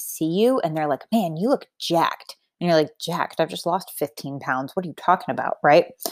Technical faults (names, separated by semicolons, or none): none